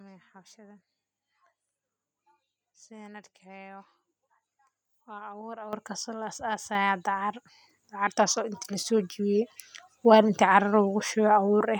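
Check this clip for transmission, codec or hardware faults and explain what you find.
There are two microphone volume step-ups, about a second apart. At 5.73 s the level jumps by about 10 dB, and at 6.75 s it rises again by about 6 dB. The call software judged the microphone input too quiet and raised the device's input volume in discrete steps instead of ramping it. Because the change happens before any processing, the speech and the background noise floor become louder together, abruptly.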